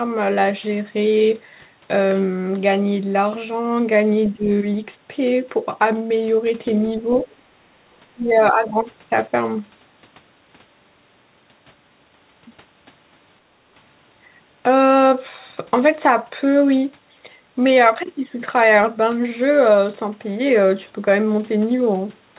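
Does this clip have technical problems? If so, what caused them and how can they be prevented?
Yes. The talker's voice dips three times: briefly at 4.33 to 4.5 s by roughly 10 dB, more gently at 6.97 to 7.28 s by a few decibels, and hardest at 8.09 to 8.78 s, where it falls by roughly 25 dB for about 0.7 s. The likely cause is speech suppressed in double talk. The far side was speaking, and the echo canceller treated the local voice as loudspeaker echo and turned it down. Unlike gating, the voice itself sinks, not just the room sound around it. Prevention: use a canceller with better double-talk detection, or a headset so that little echo reaches the microphone.

Between 7.64 and 7.68 s the room sound drops by about 14 dB for roughly 40 ms, then comes straight back. This is background gated by the echo canceller: while the loudspeaker played, the canceller clamped the microphone hard, and the ambience fell away in a short hole. 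It differs from double-talk suppression because only the background is affected, in a single brief notch. The sound throughout stops at 4 kHz, which fits the G.711 mu-law codec at 64 kbps. Prevention: soften the canceller's residual suppression, or add comfort noise so the drop is masked.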